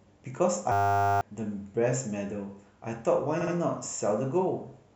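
Speech, with two timing faults. From 0.72 to 1.21 s a system hang loop replaces the audio with a steady buzz at 100 Hz: the same 10 ms piece repeats 49 times, consistent with a 10 ms ring buffer replayed while the host stalled, and about half a second of speech is lost. At 3.41 to 3.54 s repeated frames produce a brief stutter. The repeated stretch fits two 64 ms compressed frames being delivered again, which lengthens the clip by 128 ms.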